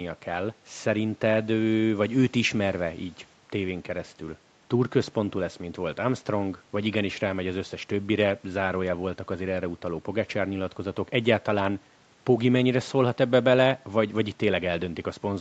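No faults: the speech carries the expected call-path character, with the microphone high-pass trimming the lowest bass and nothing audible above about 8 kHz, consistent with a wideband Opus call at a moderate bitrate.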